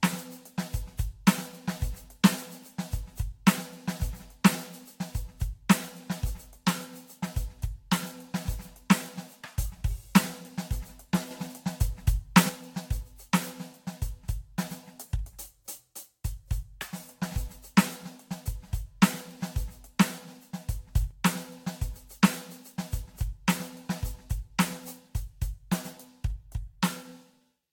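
From the start the music has the swirly, hollow smear of generation loss, likely from around seven Vorbis re-encodes near 68 kbit/s; a spectrogram shows mottled holes and nothing above 19.4 kHz.

At 11.31 to 12.49 s and again at 20.96 to 21.11 s, a sudden gain jump of about 6 dB, then about 5 dB, lifts music and noise together; the waveform steps abruptly, likely from an unramped digital gain change.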